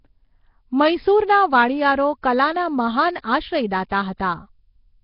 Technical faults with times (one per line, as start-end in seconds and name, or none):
0.00-5.04 Nellymoser compression